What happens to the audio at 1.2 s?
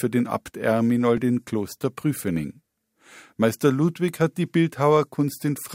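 A repeated buffer occurs at about 1.17 s. Fresh audio failed to reach the output in time, so the device replayed the block it had just played rather than falling silent. That block lasted roughly 5 ms, which fits a 256-sample buffer. It sounded twice in a row, with a hard join at the repeat, and a few milliseconds of the speech were lost. At this short length it comes across as a brief click or buzz, not a stutter.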